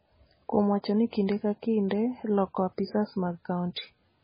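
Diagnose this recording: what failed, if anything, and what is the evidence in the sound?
The codec stage is the likely culprit, with heavy MP3 compression throughout the speech. Nothing survives above 5 kHz, so a spectrogram shows a hard flat ceiling there with patchy, flickering gaps below it. The sound is watery and smeared, which fits a bitrate around 16 kbps.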